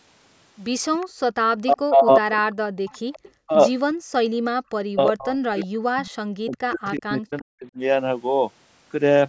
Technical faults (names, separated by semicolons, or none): echo leak; background gated by the echo canceller; speech suppressed in double talk